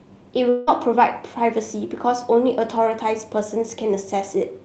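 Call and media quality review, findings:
Long network dropout, 0.49–0.69 s: sound replaced by a synthetic buzzy continuation that decays without reaching silence, then resumes with about 0.18 s missing. Likely packet loss, with the jitter buffer's concealment filling the gap. Spectrogram shows smeared, repetitive harmonics across the gap. Waveform shows a fading periodic pattern instead of natural envelope.

Call path: Opus coding with the spectrogram ending abruptly near 8 kHz, consistent with roughly 32 kbps.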